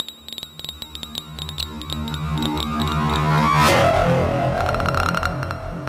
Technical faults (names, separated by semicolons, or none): corrupt frame decoded